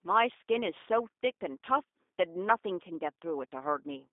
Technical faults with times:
0.00-4.13 G.729 codec

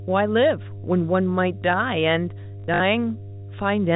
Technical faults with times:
0.00-3.96 mains hum
0.81-0.84 packet loss with last packet repeated
2.60-2.80 packet loss with last packet repeated

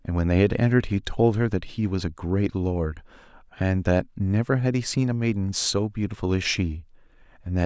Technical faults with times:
none

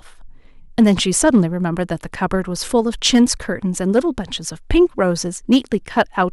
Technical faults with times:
0.79-1.39 hard clipping
3.06-3.30 hard clipping
3.97 hard clipping
5.52-5.57 hard clipping

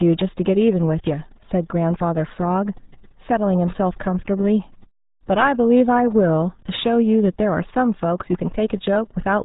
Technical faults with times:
0.00-9.45 RealAudio 14.4 codec

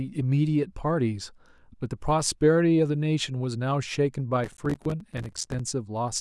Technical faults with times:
4.44-5.59 processor overload crackle

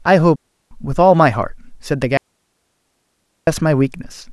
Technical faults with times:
0.36-0.71 digital wireless dropout
2.17-3.47 digital wireless dropout

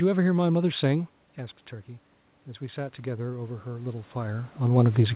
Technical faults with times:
2.58-5.15 automatic gain rising

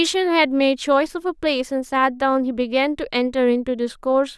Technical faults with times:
none

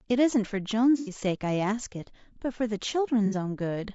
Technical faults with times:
0.00-3.94 low-delay AAC compression
0.98-1.12 AAC frame loss with concealment
3.26-3.35 AAC frame loss with concealment

